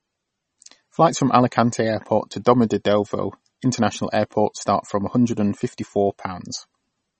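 From start to end, the speech sounds watery and swirly, and nothing is heard above 8.3 kHz. This is likely MP3 compression at a starved bitrate, which fits about 32 kbps. The encoder cut the treble and dropped weak frequency lines, which flicker between frames.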